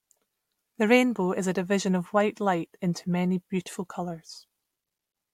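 No technical faults detected in the speech.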